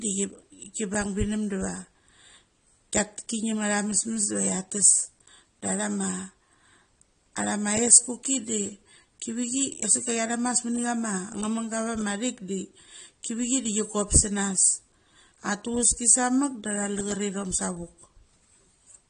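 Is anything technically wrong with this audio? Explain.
Yes. AAC compression throughout: nothing above 9.7 kHz and a dull, smeared, warbling speech texture, likely low-bitrate AAC-LC coding dropping bands, which fits roughly 32 kbps.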